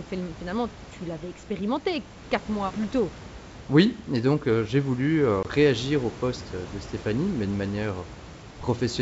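At 5.43 to 5.46 s, between "euh j'ai voulu euh" and "réagir au poste de", packet loss on the ADPCM call cuts a hard-edged 20 ms silence, consistent with a couple of lost packets. The decoder's predictor and step size then mistrack, so speech re-enters disturbed before settling within tens of milliseconds.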